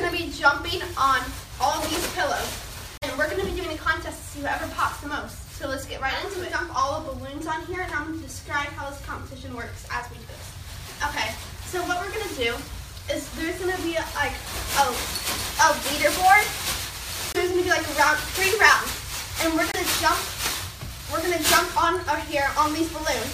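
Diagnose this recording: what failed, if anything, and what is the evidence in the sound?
Brief full-band silences at 2.97–3.04 s, 17.32–17.36 s and 19.72–19.76 s, likely a Bluetooth dropout at playback. On a spectrogram they show as blank vertical strips. Sound resumes as if it had kept playing, and the gaps fit about 23 ms packets arriving too late.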